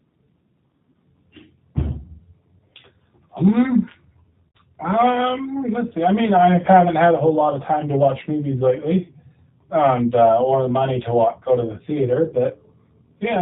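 Throughout, the G.729 codec at 8 kbit/s cuts everything above 4 kHz and adds a rough, synthetic edge from its pulse-coded excitation, unlike plain band-limiting. From 4.49 to 4.58 s, VoIP packet loss concealed by the speech codec covers about 60 ms with a stretched, fading buzz or coloured noise rather than silence, and the speech returns weak or distorted before recovering.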